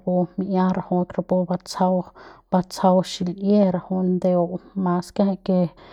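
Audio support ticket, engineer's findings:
No audible fault found on the speech recording; nothing to attribute to any component in the chain.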